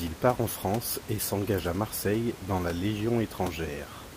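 A speech clip with nothing technically wrong with it, only the room's own background noise sitting about 15 dB below the speech.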